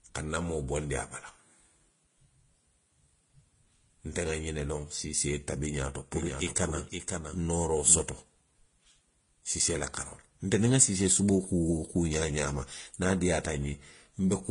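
Speech, likely passed through one low-bitrate lossy codec and then re-encoded by another, which fits HE-AAC followed by Vorbis. The transcoding between lossy codecs leaves a hard ceiling at 10.5 kHz and mixed smeared, watery artefacts. From 6.13 to 8.01 s, a second capture path or misaligned edit likely produced a doubled audio track: a dry copy about 5 dB quieter trails roughly half a second behind, starting and stopping abruptly.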